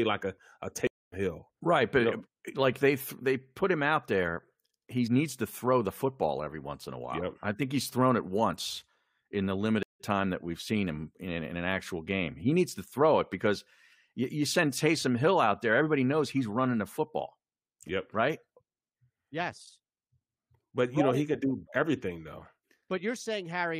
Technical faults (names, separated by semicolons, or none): stream reconnect